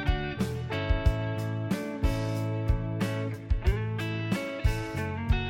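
No technical faults are audible anywhere in the audio.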